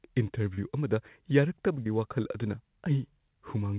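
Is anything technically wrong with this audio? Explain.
Yes. Short concealed packet loss occurs at 0.54 s and at 1.83 s, just before "ꯋꯥꯈꯜ ꯑꯗꯨꯅ". About 40 ms and then 20 ms of speech arrived too late, and the receiver filled each gap by extending the preceding sound before blending back. This leaves brief smears in the speech, heard through a call path whose audio stops at 4 kHz.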